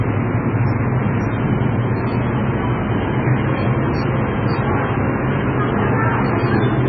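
From start to finish the treble just stops at 5.7 kHz, and the sound turns watery and swirly, with chirpy metallic edges and smeared attacks. That's likely heavy MP3 compression starved of bits, which fits a bitrate down around 16 kbps.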